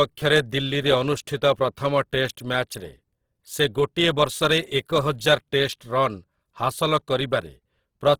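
Speech that sounds rough and grainy throughout while still reaching 20.3 kHz: likely Opus compression at a low bitrate, with starved bands filled by noise.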